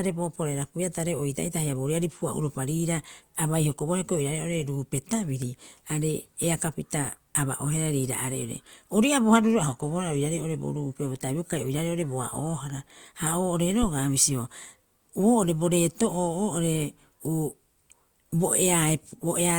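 A deep, brief thump at 13.83 s, dying away within about 13 ms, is a phantom power thump: a supply switched on the live input, its voltage step passing through the coupling capacitors.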